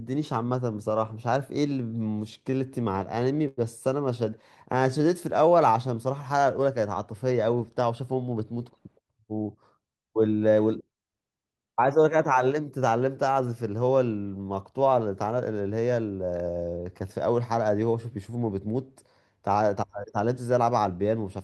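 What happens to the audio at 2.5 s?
At 2.5 s the speech is caught in repeated stalls (stutter), running from 2.39 to 3.59 s. Packets arrived too late to keep the jitter buffer fed, so playback ran dry 14 times, and each time the receiver stretched the last sound until data caught up, about 228 ms of fill in total, the longest hold 96 ms. Unlike packet loss, nothing is skipped; the speech drags and hiccups instead of jumping.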